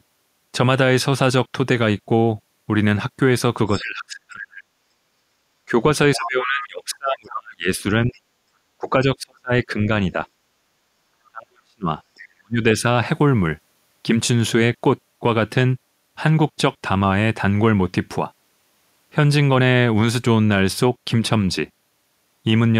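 From 3.72 to 4.63 s, then 6.15 to 6.66 s, 8.12 to 8.20 s and 11.26 to 12.29 s, the other side's voice leaks through, about 25 dB, 10 dB, 35 dB and 25 dB below the talker. The echo canceller likely left loudspeaker sound in the microphone. This is a second voice, not a dip in the first. Speech suppressed in double talk overlaps it at 3.78 to 4.57 s, 5.68 to 9.89 s and 11.29 to 12.82 s. The talker drops by as much as about 30 to 40 dB, likely because the canceller turned down both voices at once.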